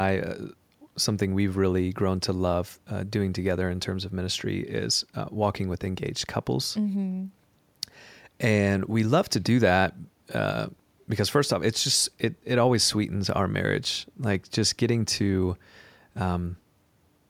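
Nothing in this speech recording stands out as a technical fault, so there's nothing here to point to or explain.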